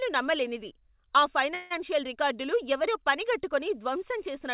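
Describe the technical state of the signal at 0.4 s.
At 0.4 s the speech is intact, with no fault present, only the narrow telephone-style band of the G.711 call path, which leaves nothing above 4 kHz.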